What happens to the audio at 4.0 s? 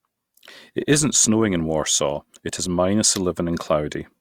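Nothing goes wrong at 4.0 s: the speech carries on intact through that moment, with no dropout, click, distortion or other fault.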